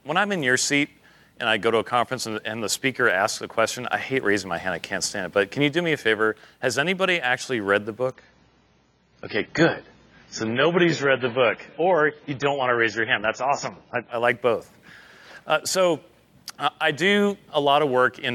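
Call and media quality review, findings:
Adaptive stream at a lower bitrate, 8.12 to 14.12 s. Abrupt loss of treble above 7 kHz, codec artefacts up, no gap. The player switched to a lower-bitrate rendition for 6 s after the connection slowed. Fits AAC falling from 96 to 16 kbit/s.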